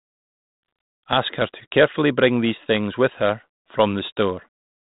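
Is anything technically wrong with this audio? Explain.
No, nothing is wrong: the speech is carried over G.726 ADPCM at 32 kbit/s, the DECT rate, band-limited to 4 kHz with the light coding texture normal for that rate.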